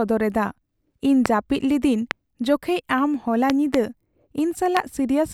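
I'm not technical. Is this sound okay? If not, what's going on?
No, there's a problem: a series of loud pops, sharp clicks or thumps that sit on top of the speech while it carries on underneath. Single pops come at about 1.26, 2.11 and 4.77 seconds, the last a bit softer, and a quick pair lands between 3.50 and 3.76 seconds. Each is a sudden jolt of electrical energy getting into the signal, likely from a loose plug, a switch, static or a glitchy audio driver.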